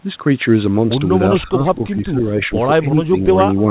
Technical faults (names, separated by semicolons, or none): speech suppressed in double talk